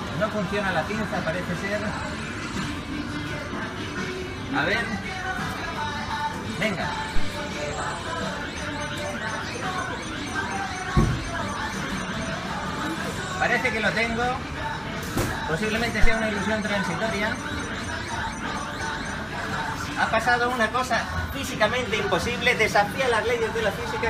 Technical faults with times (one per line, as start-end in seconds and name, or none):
7.16-7.28 phantom power thump
16.04-16.15 phantom power thump